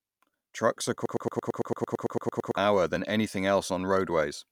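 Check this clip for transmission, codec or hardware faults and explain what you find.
One fault stands out. From 1.06 to 2.57 s, a broken-record loop plays: a 112 ms fragment repeats 14 times, back to back, just before "than anything". The stream likely stalled and resent its last buffered piece. The audio for that stretch is lost.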